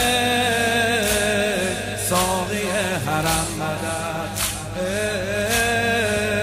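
Mains hum runs from the first moment to the last: a steady low tone at 50 Hz sitting under the whole sound, with low harmonics above it. Power-line current is leaking into the signal path, most plausibly through a ground loop between connected equipment or from a nearby transformer's magnetic field. The hum is fairly prominent, roughly 15 dB below the signal, so it stays audible as a constant drone.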